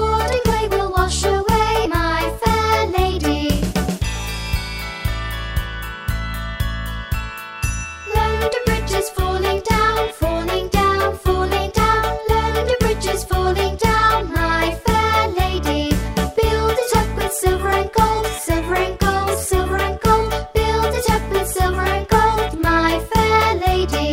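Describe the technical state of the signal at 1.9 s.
Around 1.85 to 1.88 s, compressed frames are skipped: the decoder drops a short run of frames, so roughly 70 ms of audio never plays, which fits about three 20 ms frames. The sound jumps ahead.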